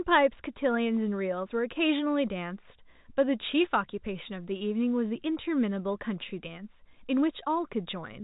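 There are no technical faults in this speech recording to describe in time order.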